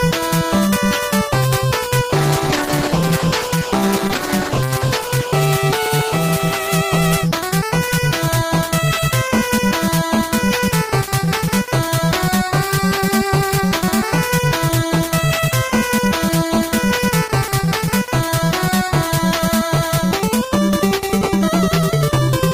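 Between 2.11 and 7.75 s the audio turns rough and muffled, with the treble cut away for about 2.6 s at its worst. This is a call bitrate drop, consistent with the encoder falling from roughly 32 to 11 kbps. Unlike packet loss, the sound never breaks into gaps.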